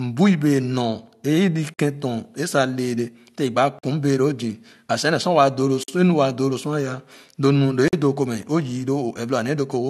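Speech with a gap between chunks: four silent holes of about 48 ms each, at 1.74–1.79 s, 3.79–3.83 s, 5.83–5.88 s and 7.88–7.93 s, recurring every 2.05 s. The audio was delivered in 2-second chunks with silence inserted at each join. Unlike a dropout or packet loss, nothing is missing: the speech picks up exactly where it stopped, so it is interrupted rather than cut, and the holes come at a fixed rhythm.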